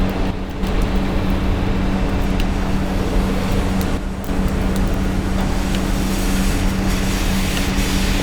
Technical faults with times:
0.31-0.63 one channel drops out
3.97-4.29 one channel drops out

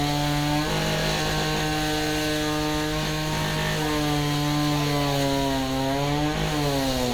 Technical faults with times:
none

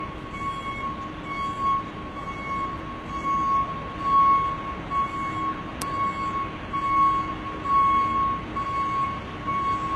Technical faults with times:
0.00-9.95 low-bitrate audio saved at a high bitrate

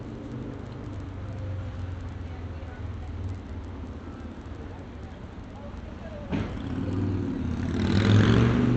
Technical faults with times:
none

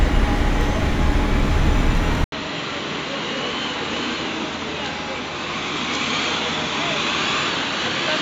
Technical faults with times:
2.24-8.21 input switched to a poorer device

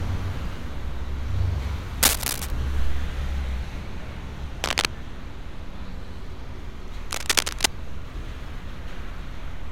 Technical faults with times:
2.03-2.51 cable scratch noise
4.62-4.85 cable scratch noise
7.11-7.66 cable scratch noise

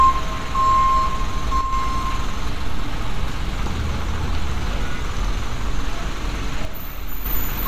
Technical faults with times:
1.61-1.73 one channel drops out
6.65-7.26 one channel drops out

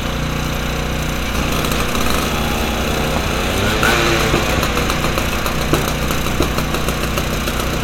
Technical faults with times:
3.16-3.29 loud pop
4.58-4.61 loud pop
6.14-6.17 loud pop

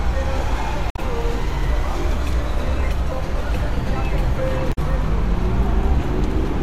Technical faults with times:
0.88-0.99 damaged data in a compressed stream
4.69-4.78 damaged data in a compressed stream

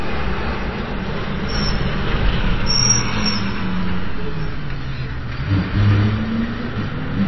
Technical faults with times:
0.00-7.28 MP3 compression

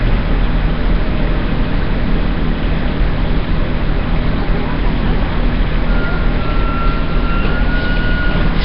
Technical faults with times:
0.00-8.64 Nellymoser compression

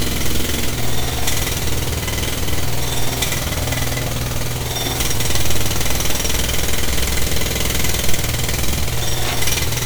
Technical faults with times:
0.00-9.86 generation loss

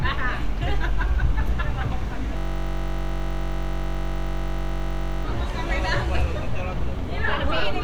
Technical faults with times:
2.37-5.25 system hang loop

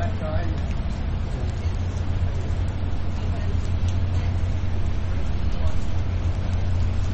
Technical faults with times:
0.00-7.14 MP3 compression
1.50 bit error spike
3.65 bit error spike
6.54 bit error spike

